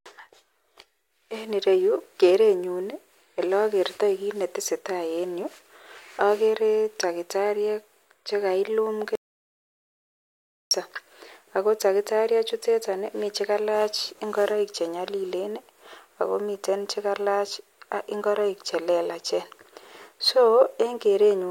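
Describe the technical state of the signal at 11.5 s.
At 11.5 s the speech signal is intact, with no dropout, click, distortion or other fault audible at that moment.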